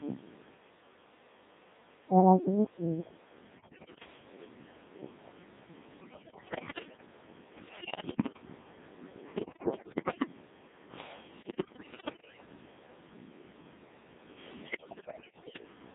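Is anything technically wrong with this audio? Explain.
Yes. The whole speech clip has passed through the Codec 2 vocoder, and on top of that there are six bursts of bit errors on digital voice radio.

The Codec 2 vocoder damage runs from start to finish. The decoder does not rebuild the original waveform. It resynthesises speech from sine waves, using only pitch, voicing, level and a coarse spectral envelope. The heavy robotic buzz fits the 1.6 kbit/s mode, and the sound sits in a band from about 150 Hz to 3.7 kHz. Because the damage is constant and uniform, it cannot be mistaken for the bursts described below.

The bit errors on digital voice radio occur at 3.52–4.06 s, 6.00–7.06 s, 7.68–8.42 s, 9.36–10.27 s, 11.40–12.46 s and 14.60–15.62 s. Flipped bits, at a rate of very roughly one in ten to one in five, corrupt the frame parameters. Each bad frame therefore comes out with the wrong pitch, level or tone colour, producing bleeps, warbles and synthetic gibberish. 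Packet loss would leave gaps or repeated sound. Here the output keeps going but turns into nonsense.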